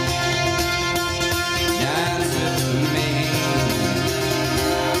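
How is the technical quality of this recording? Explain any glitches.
The recording suffers from gain pumping throughout. The level ducks by about 5 dB under each loud sound, leaving it squashed and breathing. The likely cause is input gain set far too high, with a fast limiter repeatedly clamping down on peaks.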